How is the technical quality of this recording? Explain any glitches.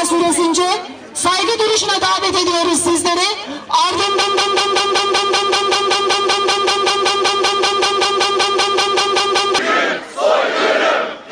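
The recording has one clear fault, a broken-record loop from 4.22 to 9.59 s. A fragment of about 190 ms repeats exactly, back to back, roughly 28 times, likely because the player or stream stalled and kept resending its last buffer. The stuttering replaces whatever audio should have played there.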